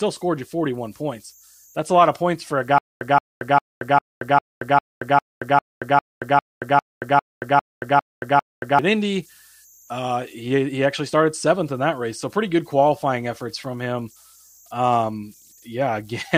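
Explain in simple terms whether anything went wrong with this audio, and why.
A faint, high whistle runs under the whole recording, pitched around 7 kHz, with a slightly grainy texture beneath the quieter moments of speech. These are converter idle tones. The part of the equipment that turns sound into digital numbers wasn't adding the small amount of random noise it needs. With very quiet input, it slipped into repeating patterns, and those patterns came out as a steady thin tone.

Right after "of points for a", at 2.78 s, the speech starts stuttering. The same short snippet, about 0.17 s long, plays, then drops to dead silence for about 0.23 s. It repeats at a steady beat every 0.4 s, 15 times, until 8.79 s. This is a stutter with silent gaps. The likely cause is a playback or streaming stall: each time it retried, it replayed its last scrap of audio and then ran out. The speech that belonged in those six seconds is missing.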